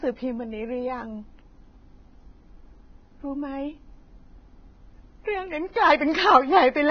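Across the whole clip the speech sounds hissy and grainy, with nothing above 6.5 kHz and smeared consonant attacks. This is likely heavy Vorbis compression: the treble is quantised so coarsely that detail turns to noise, which fits a very low bitrate of around 17 kbps.

From 5.72 to 5.76 s a short hiss runs ahead of a sharp onset, which arrives soft and blurred. This is pre-echo: the codec spread quantisation noise sized for the loud attack across its block, filling the quiet 36 ms just before it.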